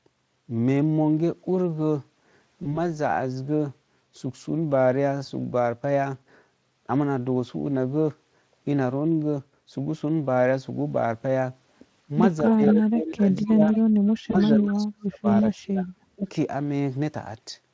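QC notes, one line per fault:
2.63–2.80 s and 14.31–14.36 s, VoIP packet loss concealed by the speech codec: each time about 20 ms of audio drops out, fitting one lost frame. The decoder fills the gap by stretching the last sound into a brief buzzy or noisy smear that fades, and it stays weak or distorted for a moment after.
12.45–12.85 s, 13.36–13.41 s and 13.75–14.52 s, echo leak: a copy of the speech trails 237 ms behind, about 10 dB down at first, then about 30 dB and 20 dB down. It's likely the far end's loudspeaker bleeding past its echo canceller.
12.45–13.75 s and 14.16–16.23 s, speech suppressed in double talk: the speech dips hard, by up to about 20 dB and then about 35 dB. This is likely the canceller losing track while both ends talk and ducking everything.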